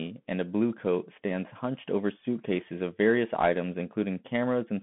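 Throughout, the speech runs through a Bluetooth CVSD headset codec. It cuts everything above 3.8 kHz, and its coarse one-bit coding adds plainly audible granular, scratchy distortion.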